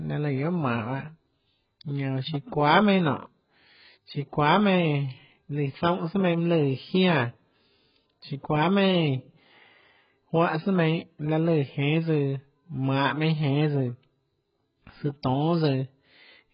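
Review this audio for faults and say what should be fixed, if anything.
The whole clip shows heavy damage consistent with AAC compression, likely AAC-LC at a very low bitrate around 12 kbps. The speech is dull and smeared, with fizzy sibilants and warbling, because the encoder removed everything above 5.2 kHz and starved the remaining bands. A spectrogram shows a hard ceiling at 5.2 kHz with patchy gaps below it. To prevent this, keep a lossless or high-bitrate master and encode speech at 48 kbps or more.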